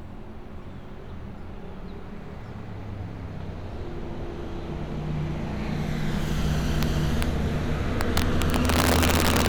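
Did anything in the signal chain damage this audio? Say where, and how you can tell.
Yes, integer overflow in the sample-format conversion: sharp cracks at 6.83 and 7.22 s, then 8.01 to 9.48 s, where peaks about 5 dB over full scale wrap to opposite sign.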